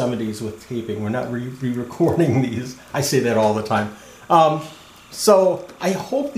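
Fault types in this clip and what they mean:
timecode bleed: 29.97-frame linear timecode leaks in from a neighbouring line, adding a faint, steady chirping warble near 1 and 2 kHz throughout.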